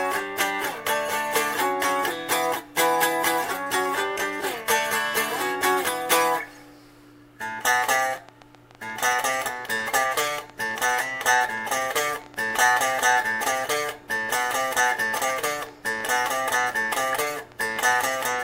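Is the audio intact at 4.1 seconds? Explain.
Yes, at 4.1 seconds the audio plays through cleanly, with no dropout, click, distortion or other fault to be heard at that point.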